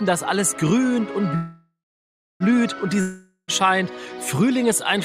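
The clip has two faults. The first is a call audio freeze from 1.35 to 2.43 s, most likely caused by packets stalling in transit until the jitter buffer ran empty. The receiver stretches the last sound into a fading buzz or hiss that settles into about 0.66 s of silence. When playback resumes, it picks up exactly where it stopped, so nothing is lost, but everything after it runs about 1.05 s later. The second is a long network dropout from 3.01 to 3.51 s, likely a stretch where no packets arrived at all. The last sound again trails off as a decaying buzz or hiss, with a brief silence of about 80 ms at the end. This time the audio returns further along, skipping roughly 0.48 s of material that is never played.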